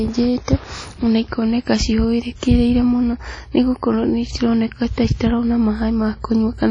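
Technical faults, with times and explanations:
Throughout, WMA compression: the speech has a ringing, washy quality, with a hiss that swells and falls along with the voice, and nothing is present above 10.1 kHz. This is likely lossy transform coding at a low rate, which fits a bitrate around 32 kbps. The quantisation noise is spread over long blocks, so it smears around each sound and pumps with it, and the encoder drops the weak top band entirely.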